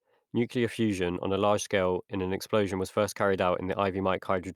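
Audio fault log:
No faults heard anywhere in this speech recording.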